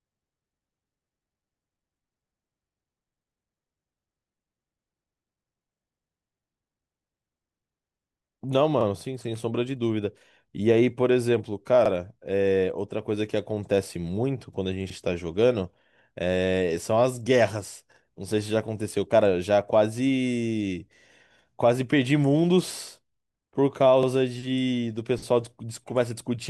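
Overlapping chunks cause a brief stutter in the speech at 5.77, 8.81, 11.86, 14.90, 17.94, 20.99 and 24.03 s. The audio was handled in 3-second chunks, and each new chunk began about 44 ms before the previous one had finished, so that sliver plays twice at every join. Unlike a dropout, nothing is missing: the same fragment repeats, giving a doubled, hiccup-like catch, and it recurs at a steady three-second rhythm.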